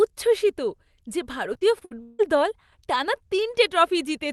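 From 1.53 to 2.21 s, between "উচ্ছ্বসিত যে" and "দল টানা", repeated packet loss makes the speech choppy. Five gaps, the longest 161 ms, are patched by extending the previous sound, so about 41% of that stretch is concealment. A spectrogram shows frozen, smeared harmonic bands, and the waveform envelope breaks abruptly.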